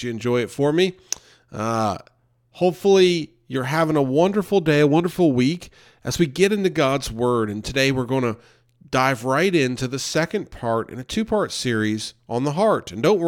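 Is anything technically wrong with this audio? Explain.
No, nothing technically wrong can be heard in this speech recording. There is no fault to explain.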